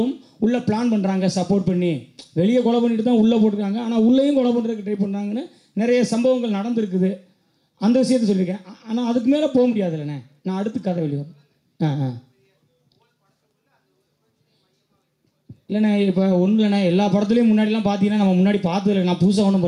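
Gain pumping runs through the whole clip: the gain swings by around 5 dB as it is pulled down on each loud sound, likely from a fast limiter fighting excessive input gain, leaving loud and soft parts squashed closer in level. Unlike a noise gate, the background never cuts to silence.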